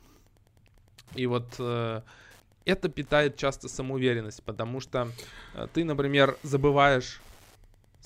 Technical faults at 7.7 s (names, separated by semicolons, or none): Wi-Fi interference